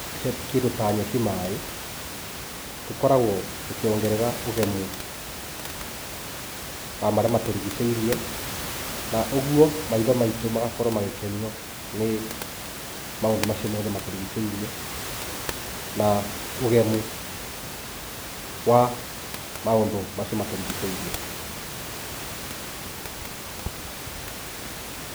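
No technical faults can be heard in the speech, and the room's background noise sits about 10 dB below it as part of the recording itself.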